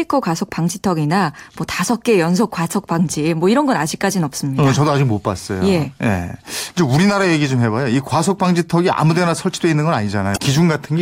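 Damaged data in a compressed stream at 10.33 to 10.39 s: corrupted frames make the decoder lose sync and hunt for the next header, producing a brief chirp, squawk, click or short hole within the speech.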